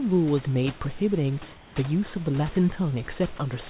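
A speech clip, heard through a narrowband call path with nothing above 4 kHz, consistent with G.711-style telephone coding. From 1.52 to 1.76 s, a 240 ms pause loses its real room background, about 22 dB below the speech, and is replaced by a steady, featureless hiss about 2 dB quieter. This is comfort noise in place of the background, likely from discontinuous transmission, where the receiver synthesises noise while the sender is silent. It is not a dropout, because the gap is filled with smooth noise rather than silence. At 3.36 to 3.38 s, about 10 ms of the speech itself vanishes into a 20 ms patch of the same flat noise: sound dropped by the voice detector, likely because a quiet ending was judged to be background. It differs from the first fault because speech, not just room tone, is lost.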